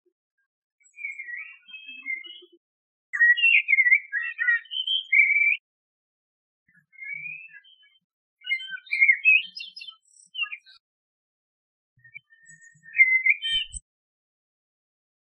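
At 3.2 s, and again from 9.42 to 9.44 s, the sound is broken by damaged data in a compressed stream. Part of the encoded data in each spot is corrupt, so the decoder cannot read those frames correctly, loses its place and has to resynchronise on a later frame header. Each is heard as a brief disturbance lasting about one to two hundredths of a second, where the audio is garbled or momentarily drops out.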